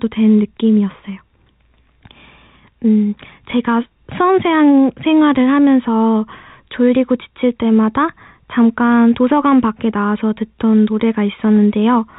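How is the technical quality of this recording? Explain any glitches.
No glitches or faults detected.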